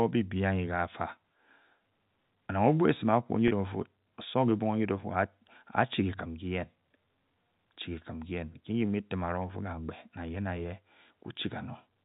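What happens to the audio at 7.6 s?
Nothing goes wrong at 7.6 s: the speech carries on intact through that moment, with only the steady 4 kHz bandwidth limit of its G.711 telephone coding.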